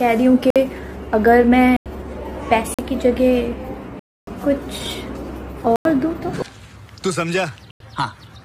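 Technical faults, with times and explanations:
0.50–0.56, 1.77–1.86, 2.74–2.79, 3.99–4.27, 5.76–5.85 and 7.71–7.80 s: block of digital silence. The sound drops abruptly to silence and returns with no fade. Gaps run 45 to 279 ms. Three last 93 ms, which fits an unfilled 4096-sample output buffer.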